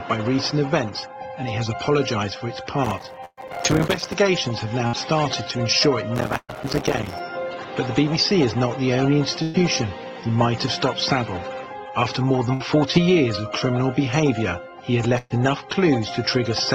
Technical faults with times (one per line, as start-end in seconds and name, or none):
2.85-4.14 processor overload crackle
3.25-3.40 burst of packet loss
4.87-4.96 burst of packet loss
6.16-7.20 processor overload crackle
6.37-6.52 burst of packet loss
9.43-9.57 burst of packet loss
12.54-12.63 burst of packet loss
15.18-15.33 burst of packet loss